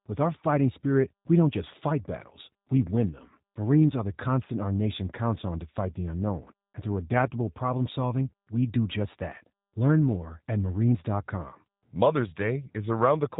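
From start to finish the speech sounds slightly rough and synthetic, with a plainly audible codec texture and no content above about 3.8 kHz, so sibilants and breath lose their edge. This is G.729 codec damage, pointing to the G.729A variant at a rate that fits 8 kbit/s. The codec models speech as a vocal tract filter plus a pitch predictor and a few pulses per short frame, rebuilding only a coarse approximation of the original waveform.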